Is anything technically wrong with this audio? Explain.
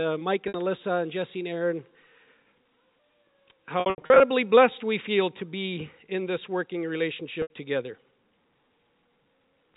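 Yes. Packet loss with pitch repetition occurs at 0.48 s (60 ms), at 7.42 s (80 ms), and in scattered bursts between 3.80 and 4.20 s. In that burst about 240 ms is lost, with the longest run 80 ms. At each gap the receiver repeats the last pitch period, so the speech holds briefly on a buzzy, sustained tone. A plain dropout would instead fall silent or click. All of this sits within narrowband telephone audio with nothing above 4 kHz.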